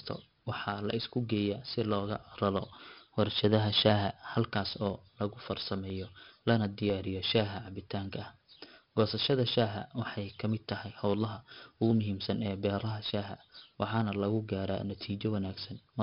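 A speech recording, gritty and dull from start to finish. A coarse hiss clings to every loud syllable and rises and falls with the level, sharp onsets break up into distortion, and nothing is present above 5.3 kHz. The cause is heavy 4-bit ADPCM compression: each sample is coded as a small step from a prediction, the step size lags behind fast changes, and the quantisation error rides on the signal. The sound points to a rate of about 44 kbps.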